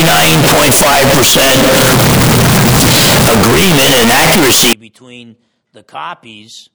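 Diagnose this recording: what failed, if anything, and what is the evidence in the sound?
Sample-format conversion, 0.0 to 4.73 s: near-square waveform at an almost fixed high level, broadband spectrogram, noise as loud as speech; likely float read as integer.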